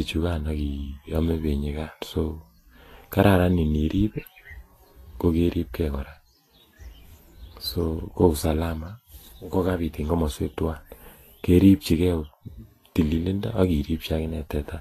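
Throughout the speech, the treble sounds hissy and grainy, with a roughened edge on tones and softened attacks, and nothing above about 14.2 kHz. Likely Vorbis compression at a low setting, which fits about 32 kbps: fine high-frequency detail is quantised so coarsely that it turns into noise.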